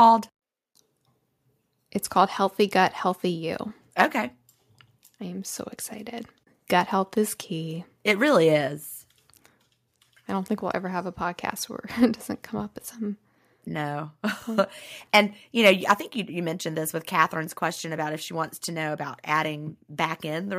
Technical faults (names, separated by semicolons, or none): microphone overload; microphone volume stepped down